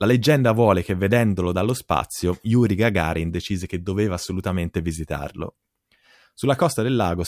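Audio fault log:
No technical faults are present.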